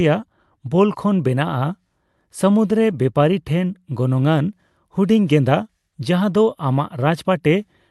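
No technical faults can be heard in this speech recording. It has passed through a call codec, which fits Opus, and the audio tops out at around 12 kHz.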